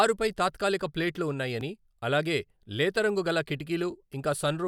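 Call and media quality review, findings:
Audio missing between chunks. A brief skip at 1.61 s, between "తాత్కాలిక ప్లేట్లు" and "అలాగే లేతరంగు గల", and another at 3.60 s, just after "అలాగే లేతరంగు గల". Each drops a few milliseconds, and the two sides are butted together with no silence. The 2.0 s spacing points to a chunked recorder or processor, likely losing samples at each boundary while closing one block and opening the next.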